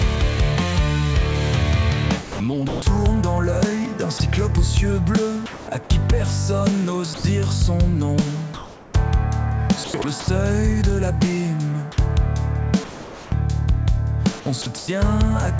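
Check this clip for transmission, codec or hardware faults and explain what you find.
Three related faults recur through the clip, all pointing to a sender whose voice detector gates the audio and whose gaps are filled with comfort noise. The audio is band-limited with nothing above 8 kHz, which fits a G.722 call path at 64 kbps.

Sound chopped by the voice detector, at 2.22–2.82 s, 5.46–5.90 s, 9.84–10.28 s and 14.62–14.88 s. The likely cause is a detector repeatedly toggling transmission, swapping between 140 and 320 ms of each stretch for synthetic noise. The result is choppy.

Sound dropped by the voice detector, at 4.18 s (20 ms), 7.14–7.24 s and 12.84–13.32 s. The detector likely judged quiet material to be background and stopped sending, losing up to 280 ms of sound. Steady filler noise replaces it until transmission resumes.

Comfort noise in place of the background, at 8.54–8.94 s. 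With the sender likely paused under discontinuous transmission, the receiver synthesises 400 ms of noise roughly matching the background, about 23 dB below the loud passages and about 1 dB quieter than the real ambience, and smoother than it.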